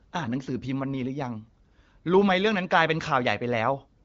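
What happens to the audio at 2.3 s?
Nothing goes wrong at 2.3 s; the speech there comes through intact, carried by the AMR wideband (HD Voice) codec at 15.85 kbit/s, with only light coding damage.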